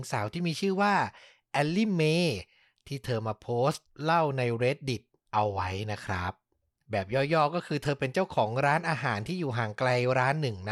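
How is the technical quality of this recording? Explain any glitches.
Nothing in this recording trips up the ear, and there are no glitches to point to anywhere along the way.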